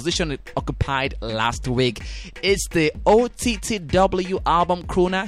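There are no technical faults to describe at any point in this clip.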